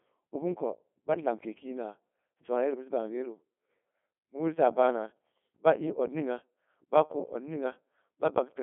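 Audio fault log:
Throughout: Codec 2 vocoder. The speech comes out robotic and buzzy, with nothing above about 3.8 kHz, and the sound suggests a rate near 2.4 kbit/s. Only pitch, voicing and spectral shape survive, rebuilt from sine waves. That heavy synthetic buzz separates it from a plain telephone band-limit.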